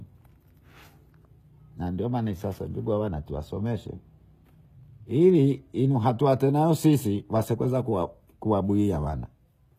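Throughout, the audio has likely been through HE-AAC compression at a bitrate near 20 kbps, with its treble synthesised by copying lower bands upward. The damage is plainly audible: s sounds turn gritty and metallic, and nothing remains above 14.9 kHz.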